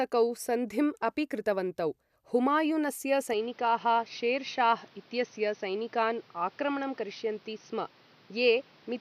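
Speech that turns duller and boxier from 3.33 s, right after "सन्धिम् अपि कृतवन्तौ हुमायूनस्य", with nothing above 6.2 kHz and new background noise about 30 dB down; the input likely switched to a poorer device.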